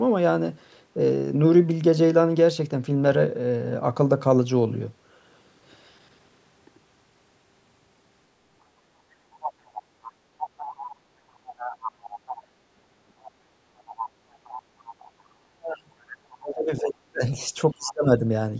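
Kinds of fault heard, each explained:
Other side's voice leaking through: a second, fainter voice surfaces in short scraps and longer stretches between about 9.3 and 17.9 s, sitting well below the main talker. It is likely the far end playing from a loudspeaker, with the echo canceller not removing it from the microphone.
Speech suppressed in double talk: the talker's voice sinks sharply, almost disappearing, for about two seconds from 15.41 s and again briefly from 17.74 to 18.24 s, while the other side talks. Likely the echo canceller, unable to separate both voices, turned both down.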